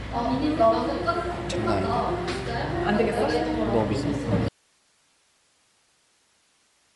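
A recording of everyday sounds, and the whole thing has that grainy, breathy top end with nothing above 11.5 kHz, which is likely Bluetooth LC3 compression at a fairly lean setting. Then at 4.49 s the signal just drops out to a faint residue, hiss roughly 40 dB down, right to the end, likely a broken link with the path left open.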